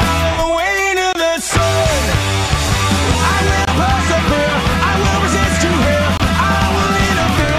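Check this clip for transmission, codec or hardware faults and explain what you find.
A single fault is present, a gap between chunks, occurring three times at 1.13, 3.65 and 6.17 s. Each hole lasts about 23 ms and they repeat every 2.5 s, so the audio arrives in 2.5 s chunks with silence inserted at each join. It sounds like a brief dropout. On the waveform each gap is a flat, near-silent slice, and on the spectrogram it is a narrow blank vertical stripe.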